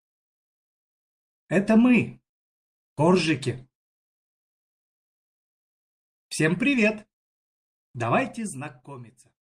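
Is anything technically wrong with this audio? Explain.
Yes, there's a clock problem running through the whole thing.

Clock drift between sender and receiver: the sending side's clock runs slow, roughly 1.5% behind the receiver's. The jitter buffer keeps draining, so the receiver can't play the audio at a steady pace and has to keep stepping in to compensate.

Repeated timing corrections: from about 0.12 s to 9.0 s, the receiver keeps repeating short bits to stay in step, which plays things at about 98% speed and adds around 150 ms overall. Where it's audible at all, it comes through as small, unevenly spaced hiccups and a slightly dragging tempo.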